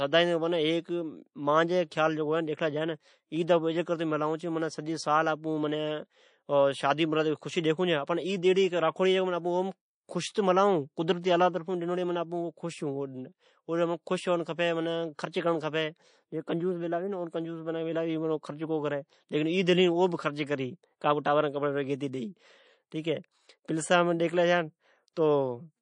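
Throughout the speech, the top end is dull and sibilants sound watery and swirly. Metallic chirps trail the s sounds. This is likely MP3 compression at a low bitrate, around 40 kbps. Starved of bits, the encoder cuts the treble and lets weak detail flicker.

Pre-echo appears at 21.98 to 22.01 s. For 23 ms before an attack, a hiss rises about 13 dB. The codec spread its noise across a block of about 52 ms. The attack sounds soft. Switching to shorter blocks would have confined that noise.

At 25.13 to 25.17 s, pre-echo returns and is stronger. A hiss about 16 dB up runs 34 ms ahead of the attack. The encoder again seems to stay with its long block. The onset smears.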